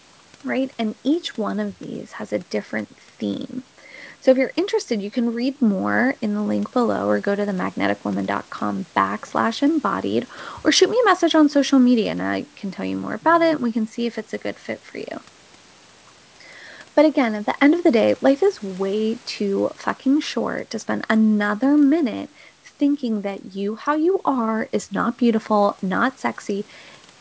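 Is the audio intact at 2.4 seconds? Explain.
Yes, the speech at 2.4 seconds is intact, with no dropout, click or distortion at that moment, only the ordinary wideband telephone sound of call microphone processing and G.722 coding, which leave nothing above 8 kHz.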